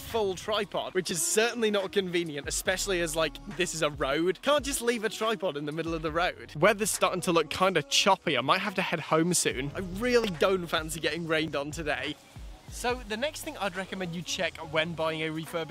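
At 1.11 s, 10.24 s and 11.48 s the audio jumps forward, and each time roughly 20 ms of material is missing. There is no gap of silence: the sound on either side of each jump is butted straight together, so the waveform breaks at the join. The likely cause is a dropped buffer (overrun), where the capture side failed to read a block of samples before the hardware overwrote it.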